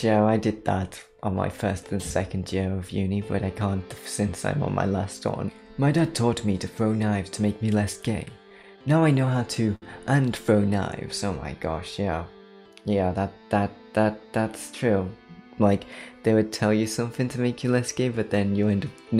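From 8.25 s to 9.83 s the audio falls into repeated stalls, a stutter. Packets reached the receiver late or too slowly, so its jitter buffer kept running dry. Ten small gaps open in that span. Each is bridged by stretching the last bit of sound, about 163 ms in total and roughly a tenth of the span. The longest wait lasts 64 ms. Nothing drops out. The sound just drags and hiccups, catching briefly and then moving on.

At 13.17 s to 13.51 s comes a jitter buffer speed-up. Audio had piled up in the buffer beyond its target, so the receiver trimmed it back. It cut several tiny slices, each one or a few pitch periods long, removing around 40 ms. That third of a second plays at about 111% speed. The pitch stays put, but the sound briefly rushes forward and feels hurried.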